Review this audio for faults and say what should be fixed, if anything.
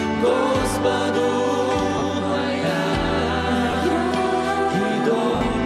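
Lost LE Audio frames show up as brief noisy smears at 1.98–2.02 s, 3.71–3.73 s and 5.35–5.41 s. Each gap, about 40, 20 and 60 ms, sounds like several 10 ms frames the LC3 decoder papered over with sign-scrambled, fading repeats. To prevent it, improve the Bluetooth link margin or add retransmission and buffering on that LE Audio connection.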